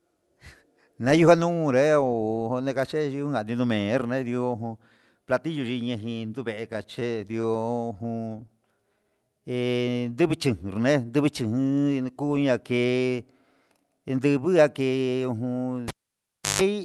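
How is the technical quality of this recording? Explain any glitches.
The recording has several clear transmission glitches from about 6.7 s onward, heard through a call codec whose band-limiting tops out around 12 kHz.

From 6.73 to 8.50 s there are repeated stalls (stutter). Packets arrived late again and again, so the jitter buffer kept running dry, and the receiver held the last sound each time. The result is roughly thirty tiny hitches, none longer than 19 ms, covering about 18% of that stretch. Nothing is lost, but the speech sounds choppy and dragging. That choppiness is what separates it from the smooth stretching of a slow-down.

From 8.97 to 10.48 s comes a jitter buffer slow-down. To rebuild its reserve, the receiver repeated single pitch periods and slivers of pauses, adding 186 ms. Speech plays at 88% speed with unchanged pitch, sounding drawn out rather than interrupted.

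Two jitter buffer speed-ups follow, at 12.37 to 13.15 s and 13.77 to 14.81 s. The buffer held too much audio, so the receiver trimmed pitch-period-sized pieces, roughly 70 ms and then about 100 ms. Speech runs at 109% speed with pitch intact, sounding hurried rather than higher.

From 15.88 to 16.62 s the cable was pulled and plugged in. A pop opens about 0.69 s of near silence, then a 148 ms burst of 50 Hz mains buzz as the plug tip makes contact, and a second pop as the sound returns. The pops and hum mark this as a physical connection fault, not a network dropout.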